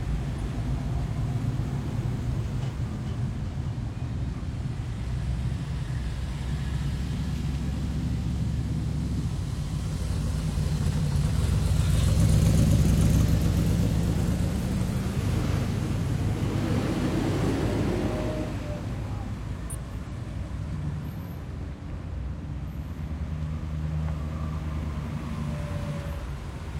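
Frames out of order: neighbouring runs of frames arrived swapped and were decoded that way at 3.38–3.68, 12.80–13.20, 14.62–14.90, 19.70–20.12 and 21.72–22.10 s. Each stretch plays with its halves exchanged, in blocks of about 139 or 186 ms, giving a garbled flutter but no lost time.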